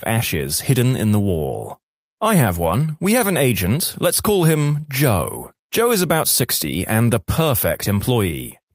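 Speech, with no technical fault to be heard anywhere in the recording. Nothing in the signal path calls for a time, a value or a cause.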